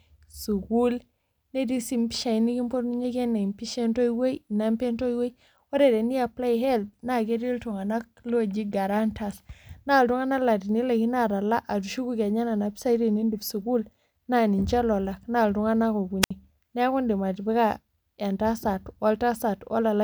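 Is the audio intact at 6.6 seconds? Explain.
Yes, the audio is intact at 6.6 seconds, with no audible fault at that moment.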